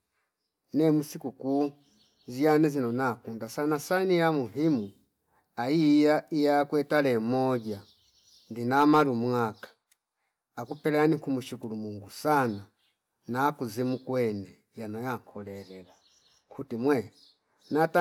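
Hard clipping shows up twice, from 8.77 to 9.02 s and again from 17.82 s to the end. Peaks pushed about 3 dB and about 2 dB past the limit get sliced flat, so you hear a brief crackly edge.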